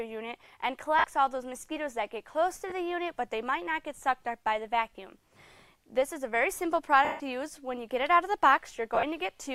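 Brief noisy smears interrupt the sound at 0.99–1.04 s, 2.70–2.72 s, 4.93 s and 8.95–9.03 s. The longest, 7.05–7.20 s, fades into silence. These are lost LE Audio frames: the LC3 decoder refilled each gap by replaying the last spectrum with random signs, muting it as the gap lengthened. The losses run about 50, 20, 20, 150 and 60 ms, which fits 10 ms frames. The last is scattered over 80 ms, with its longest run about 30 ms.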